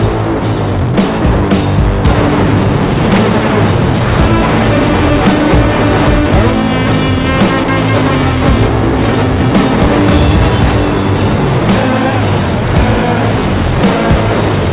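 Sound dropped by the voice detector, at 0.40 to 0.42 s and again at 7.64 to 7.68 s: for 20 ms and then 40 ms the audio gives way to steady noise before returning. The likely cause is the sender's detector mistaking the sound for background and the receiver filling in comfort noise. Nothing is heard above 4 kHz, which fits a 64 kbps G.711 mu-law call path.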